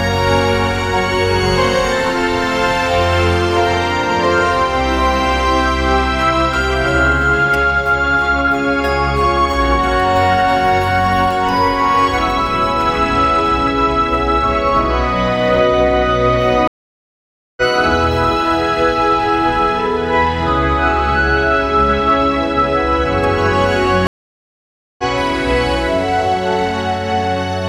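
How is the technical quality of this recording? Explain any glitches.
The recording has two stream reconnect dropouts, at 16.68–17.62 s and 24.07–25.04 s. Each time the connection broke, playback went silent for about 0.9 s, and a fresh decoder restarted mid-stream. The sound resumes further along, skipping roughly half a second the first time and about 0.7 s the second, so the material audibly jumps. On a waveform each shows as a flat gap with a mismatched edge; a spectrogram shows a blank vertical band.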